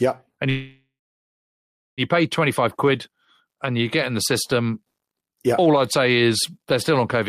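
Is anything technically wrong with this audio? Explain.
Yes. A call audio freeze runs from 0.49 to 2.01 s. The speech stops, the last sound carries on as a fading buzz or hiss, and then there is roughly 1.06 s of silence before the speech resumes where it left off. The likely cause is packets stalling in transit so the jitter buffer emptied and the receiver filled the gap. Nothing is lost, but everything afterward arrives about 1.48 s late.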